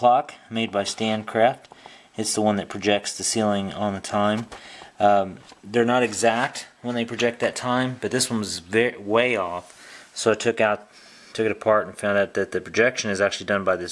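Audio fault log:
No faults heard anywhere in the recording.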